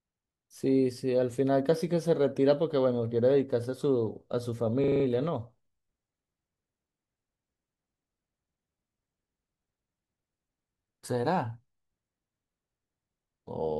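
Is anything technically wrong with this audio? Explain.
Yes. From 4.84 to 5.04 s the speech is replaced by a rapid, mechanical buzz. A 40 ms fragment repeats exactly five times at 25 Hz. This is a system hang loop: the system stalled while the sound hardware kept replaying the same short ring buffer.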